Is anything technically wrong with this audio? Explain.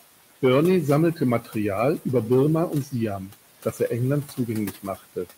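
Yes, the processing has removed too much.

Noise suppressor artifacts run through the whole clip. The suppressor adjusts each frequency band frame by frame, pulling down the steady room noise by about 18 dB. That noise sits about 15 dB below the speech, so the background audibly sinks in pauses and swells back under speech.

Speech cut by the noise suppressor occurs at 1.41–1.56, 2.69–2.94, 3.18–3.34, 3.64–3.90, 4.24–4.49 and 4.72–5.28 s. Here the suppressor mistook quiet speech for noise, lowering it by about 11 to 18 dB for roughly a tenth to a fifth of a second each time. Softer sounds come out swallowed and faint.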